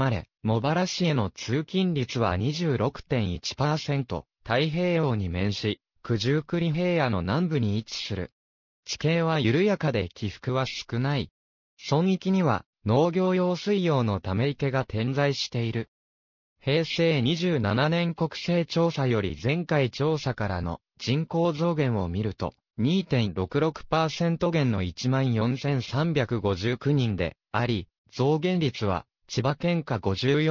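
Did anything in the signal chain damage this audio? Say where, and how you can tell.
Yes, there's aliasing from sample-rate conversion throughout: gritty, metallic highs folding back around 6 kHz, which fits an unfiltered drop to 12 kHz, with fold-back products roughly 20 dB down.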